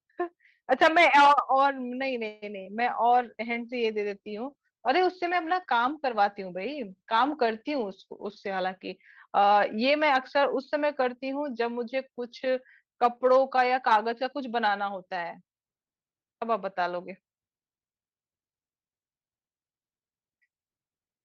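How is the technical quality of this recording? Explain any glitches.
The recording has several network-related glitches clustered in the first half, from about 2.3 s to 11.2 s.

Call audio freeze, 2.27 to 2.44 s: the sound stops advancing for about 146 ms, and the last sound is stretched into a fading buzz or hiss before the speech resumes exactly where it left off. Nothing is lost, but the playback now runs 146 ms later. The likely cause is packets held up in transit, which let the jitter buffer run dry so the receiver had to invent audio until they arrived.

Short concealed packet loss, 2.64 to 2.68 s: a brief smear or wobble is audible just after the freeze. About 20 ms of audio never reached the decoder in time. The receiver covered roughly 16 ms of that gap by extending the preceding sound, then blended back into the real signal.

Call bitrate drop, 3.10 to 8.54 s: for over five seconds the speech turns rougher and duller, with a coarse, watery texture. 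The encoder's budget fell from 32 to 17 kbps and stayed at the low rate for about 5.4 s. This happened because the link's bandwidth estimate sank, forcing Opus to spend fewer bits per frame and render detail more crudely until the rate recovered.

Jitter buffer speed-up, 8.06 to 8.64 s and 9.04 to 11.16 s: the speech sounds slightly hurried while its pitch stays unchanged. It runs at about 107% speed in the first stretch and 105% in the second. The buffer had built up surplus delay, so the receiver trimmed tiny pitch-period slices, about 50 ms in the first stretch and about a tenth of a second in the second.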